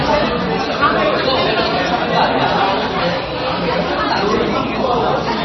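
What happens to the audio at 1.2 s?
At 1.2 s the sound is watery and swirly, with smeared attacks and nothing above 5.9 kHz. That dull, garbled character runs through the whole clip and isn't specific to this moment. The likely cause is heavy MP3 compression at a low bitrate, around 24 kbps. Starved of bits, the encoder drops weaker frequency lines, which then flicker on and off from frame to frame, and it cuts everything above the fixed treble limit.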